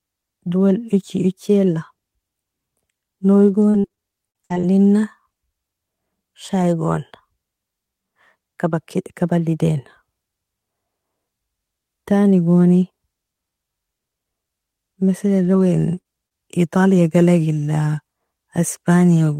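From 3.47 to 4.65 s there's repeated packet loss with a robotic sound: nine gaps, the longest 58 ms, so nearly a quarter of that stretch is patched by stretching the previous audio. It comes out choppy, with around 150 ms of the speech rebuilt rather than real.

Later, single packets are lost but recovered by error correction at 15.45, 15.55, 15.59 and 15.97 s. Each 20 ms frame is rebuilt from the low-bitrate copy carried in the next packet, so there's no gap, just a brief rough, noisy patch.

Around those, there's short concealed packet loss at 15.95 to 15.99 s, 16.01 to 16.07 s and 16.27 to 16.33 s, each 20 to 40 ms missing and filled by extending the last sound. You hear them as quick smears or wobbles, and a short consonant can drop out.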